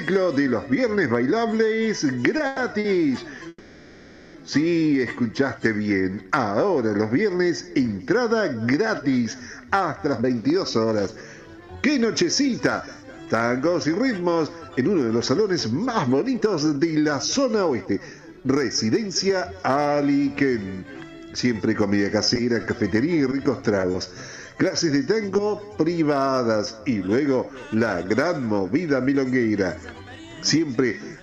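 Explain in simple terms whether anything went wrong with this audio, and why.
Right at the start, around 2.37 to 2.86 s, there's a bout of repeated stalls (stutter). The audio catches three times in half a second, with the longest catch about 110 ms and roughly 170 ms of stretched-out sound in all. Packets were arriving more slowly than they were being played, so the receiver kept running dry and holding onto the last bit of sound until the next packet showed up. Nothing's actually missing. It just drags and hiccups.

Just after, from 3.48 to 4.36 s, comes a call audio freeze. For about 0.86 s the sound hangs as a held, fading continuation of whatever came before, with a tiny silent moment of about 30 ms. Then it picks up exactly where it stopped. The likely cause is packets getting held up in transit so the buffer emptied. That gap pushes everything after it about 0.86 s later.

From 10.06 to 19.52 s you get a jitter buffer speed-up. 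The receiver had built up more backlog than it wanted, so it quietly snipped out tiny slices many times over to catch up, roughly a second's worth in total. The result plays at about 111% speed without any change in pitch, so this stretch feels a bit rushed.

Between 22.34 and 25.40 s there are scattered short gaps. About seven packets went missing here and there, each hole no longer than around 20 ms. The receiver papered over each one by continuing the previous sound, so you hear brief ticks or little smears rather than dropouts. About 60 ms of real audio is actually gone across that stretch.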